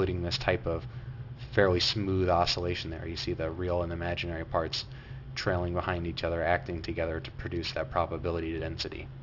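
From start to finish, the high end sounds gritty and metallic, with harsh, unrelated tones tangled into the sound and a spectrum that runs hard up to a wall at 6 kHz. This is aliasing: the sample rate was cut, which fits a drop to 12 kHz, without first filtering out content above the new 6 kHz limit. That content folds back below 6 kHz at wrong frequencies, and it sits fairly loud, not far beneath the wanted sound.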